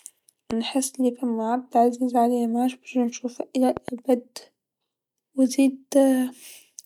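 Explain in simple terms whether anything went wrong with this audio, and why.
A loud pop snaps at 0.51–0.53 s, before "نحس أني فما عبد", and a double pop follows at 3.77–3.90 s, after "عليا معادش باش نشوفه". Each is likely a sudden electrical jolt, from a plug or switch, landing on the speech.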